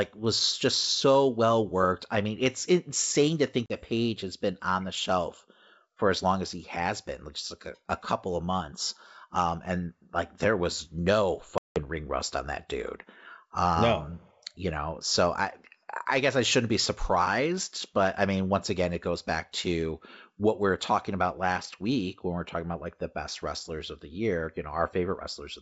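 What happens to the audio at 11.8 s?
At 11.8 s the speech is coming back out of a packet loss gap on an ADPCM call. The hole runs from 11.58 to 11.80 s, between "like there was no" and "ring rust on that": about 180 ms of hard-edged silence, consistent with roughly ten lost packets. During the gap the receiver's adaptive predictor and step size fall out of step with the sender's, so when the wideband G.722 audio resumes it starts mismatched and needs some tens of milliseconds to settle.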